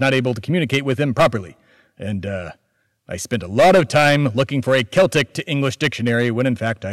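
Hard clipping runs through the whole speech clip. The signal is driven about 11 dB past what the chain can pass. Peaks are sliced flat, a few percent of samples in all. The flat tops add high harmonics, heard as harsh fuzz on loud syllables.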